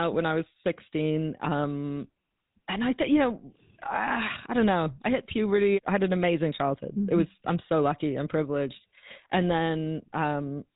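From start to finish the speech carries the plainly audible mark of the GSM full-rate codec, consistent with its fixed 13 kbps stream. The codec rebuilds each sound from a vocal-tract model excited by a sparse, regular pulse train, so the result is a buzzy, gravelly roughness. It also has a hard ceiling with nothing above 3.8 kHz. That grainy texture sets it apart from simple telephone band-limiting, which dulls the sound without adding the rasp.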